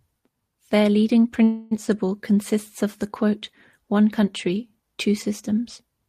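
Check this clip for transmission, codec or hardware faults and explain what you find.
One fault is audible, a call audio freeze. From 1.43 to 1.73 s the last sound is held as a fading buzz for about 280 ms, and the speech then resumes where it stopped, with nothing lost and about 280 ms of delay added. The likely cause is packets held up in transit, leaving the jitter buffer empty.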